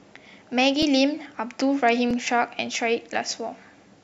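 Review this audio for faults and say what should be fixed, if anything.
Repeated buffer at 0.82 s and 2.11 s: late audio made the device replay a 1.33 ms chunk, fitting a 64-sample buffer, producing brief clicks. Enlarging the output buffer or raising audio-thread priority would prevent this.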